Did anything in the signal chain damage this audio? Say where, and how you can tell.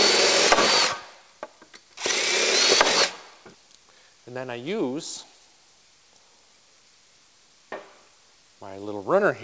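No, nothing in the chain damaged it; the only mark is the call path's G.722 wideband coding, which leaves nothing above 8 kHz, as that codec is designed to.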